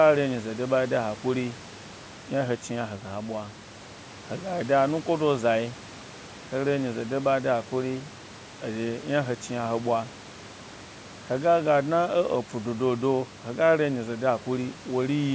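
No technical faults can be heard in this speech.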